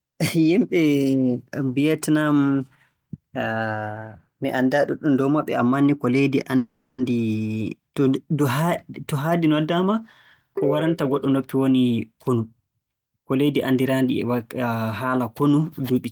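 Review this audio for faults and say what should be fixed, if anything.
A long network dropout, likely a break in packet delivery, cut the incoming audio from 6.57 to 7.02 s, right after "ammaa ni ko leydi". The receiver stretched the last sound into a fading buzz or hiss for 430 ms, then 10 ms of near-silence. When the speech resumes, 400 ms of it is missing. Fix this with a more reliable network path and a larger jitter buffer so that short outages are absorbed before playback runs dry.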